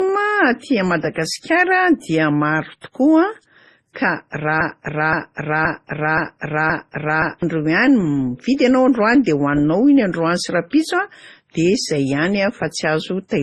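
From the start of the speech to its end, the audio carries transcoding between lossy codecs. Nothing is present above 12 kHz, and two distinct layers of coding damage are heard together. There is the smeared, swirly treble of a low-rate MP3 and, on top of it, a second codec's own grainy texture. That pattern is likely an MP3 encode at around 24 kbit/s re-encoded to Opus at about 32 kbit/s. A single low-bitrate encode would show only one kind of artefact.

From 4.61 s to 7.43 s there is a broken-record loop. A fragment about 0.52 s long repeats exactly, back to back, five times. The likely cause is a player or stream that stalled and kept resending the last piece it held. Whatever should have played in those seconds is gone. Unlike a stutter or an echo, each repeat is identical and does not decay, and the sound resumes only when the stall clears.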